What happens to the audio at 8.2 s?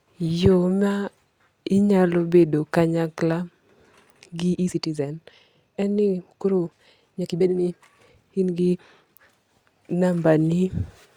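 At 8.2 s you're inside a time-stretched section that runs from about 4.48 to 9.2 s. The speech jumps to roughly 1.84 times its normal pace with the pitch unchanged, so it sounds rushed. That's likely software squeezing the audio by dropping short slices.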